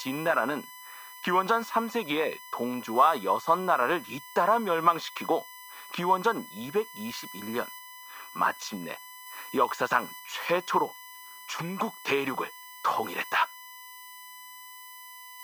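From start to finish the speech carries USB whine, a steady 1 kHz tone roughly 20 dB below the voice. Current drawn in 1 ms bus frames leaks in through power or ground. A spectrogram shows an unbroken horizontal line at 1 kHz.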